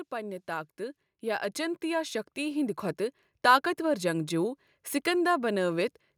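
Automatic gain rising runs from 0.09 to 2.87 s in this speech recording: the gain control judged the input too quiet and lifted it slowly by about 8 dB, so the voice and the background noise swell upward together over nearly three seconds.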